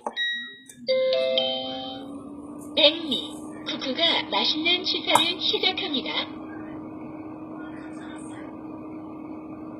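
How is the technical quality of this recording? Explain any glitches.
Technical quality is let down by plainly audible codec damage throughout, plus one brief smear on an attack.

Throughout the clip, the treble sounds gritty and metallic, with nothing above 14.8 kHz. This is likely HE-AAC compression at a low bitrate of around 20 kbps. The top end is rebuilt by copying lower bands upward, so it reaches high but is not true to the source.

At 0.87 s there's pre-echo. A short hiss leads into an attack, smearing it over about 15 ms. The codec spreads its noise across a whole block, so noise sized for the loud hit leaks into the quiet moment just before it.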